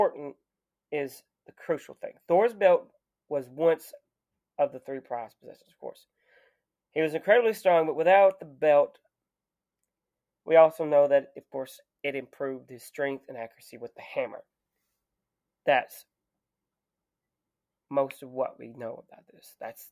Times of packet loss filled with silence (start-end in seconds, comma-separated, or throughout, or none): none